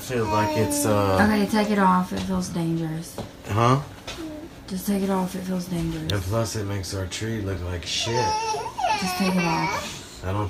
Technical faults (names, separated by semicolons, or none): electrical switching spike